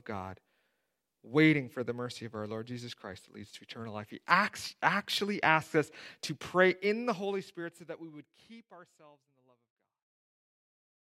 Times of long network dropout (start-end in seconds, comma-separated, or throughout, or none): none